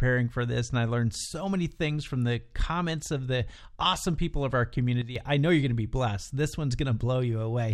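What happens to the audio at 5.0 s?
Right after "awesome people of our", at 5.02 s, the speech and its background noise drop together by about 10 dB in a single step, stay down until 5.16 s, then return before "I know you're going". This is a sudden gain jump, likely caused by a digital gain setting or bit shift applied from one sample to the next with no ramp, so the whole signal changes level at once.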